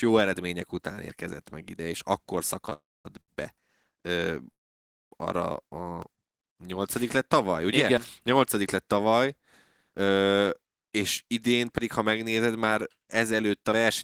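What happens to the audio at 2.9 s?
Packets were likely held up in transit, emptying the jitter buffer and causing a call audio freeze from 2.73 to 3.07 s. The last sound trails off as a fading buzz or hiss into about 230 ms of silence, then resumes where it stopped, with nothing lost.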